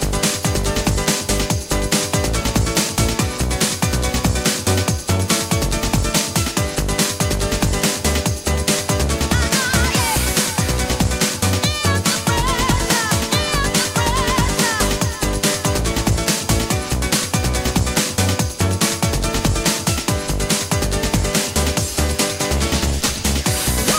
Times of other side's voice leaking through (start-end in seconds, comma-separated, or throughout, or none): none